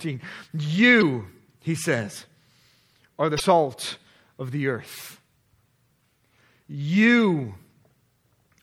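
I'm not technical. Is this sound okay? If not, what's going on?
No. Throughout the speech there's a watery, swirly quality with smeared consonants, and that is likely MP3 compression squeezing the sound too hard, so the encoder throws away treble and quieter detail to save space.

There are also three short blips from damaged data in a compressed stream: at 0.98 to 1.03 s just before "he says", at 3.36 to 3.40 s just after "are the", and at 5.45 s after "of the earth". At each one the player hit corrupted data, lost its place and searched for the next readable chunk.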